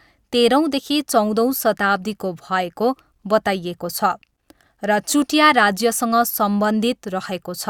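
No dropouts, clicks, distortion or other faults are audible anywhere in the recording.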